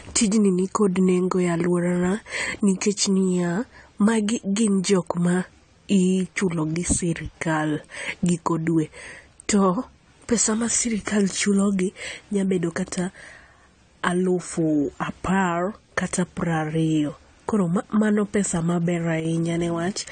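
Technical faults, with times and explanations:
Throughout: AAC compression, likely AAC-LC running at a low bitrate, which fits roughly 32 kbps. Nothing is present above 9 kHz, so the speech sounds dull. Coarse spectral quantisation leaves plainly audible smearing and a warbling, fizzy texture on sibilants.
19.20–19.25 s: one channel drops out for about 50 ms. The speech level falls abruptly by about 6 dB and then recovers. This is what a mono sum produces when one stereo channel is likely lost, because content shared by both channels is halved.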